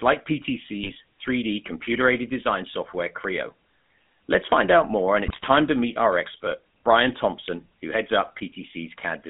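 Speech heard through the GSM full-rate codec, with a steady buzzy, gravelly roughness over the whole clip and a band running only from about 150 Hz to 3.5 kHz, which fits a 13 kbps GSM full-rate link. The coarse texture comes from rebuilding the voice from a vocal-tract model excited by sparse, regularly spaced pulses. Unlike a plain telephone band-limit, which only sounds thin, this adds a grainy edge that never lets up. Two short bursts of GSM bit errors break through, from 0.82 to 0.93 s and from 5.26 to 5.47 s, the second longer and harsher. Corrupted filter, pitch and gain values make the decoder briefly twist the spectrum and jump in level, so the voice squawks and gargles. That separates it from lost frames, which leave gaps or smeared repeats instead of these sudden distorted outbursts.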